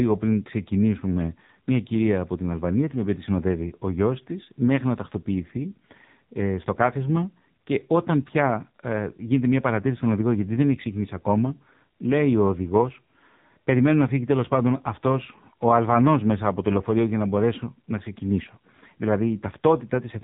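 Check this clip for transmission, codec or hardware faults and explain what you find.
One fault runs through the whole clip. The speech has passed through the AMR narrowband mobile codec.

From start to end, nothing above about 3.8 kHz survives. The speech sounds thin, muffled and boxed in. The damage is heavy. Voiced sounds have a buzzy, synthetic edge. The codec rebuilds speech from a vocal-tract model excited by a few pulses per 5 ms slice of each 20 ms frame. At low bit budgets that excitation is coarse. The buzz fits one of AMR-NB's lower modes, around 6.7 kbps.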